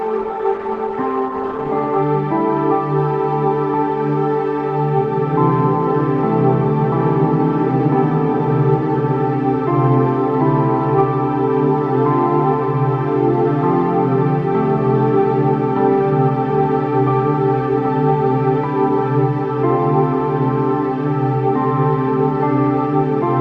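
For the first 2.0 s the audio sounds dull and smeared, with missing or synthetic treble and strong codec artefacts, then clears abruptly with no gap. This is an adaptive stream starting at a low bitrate, consistent with Opus around 16 kbit/s before stepping up to 64 kbit/s.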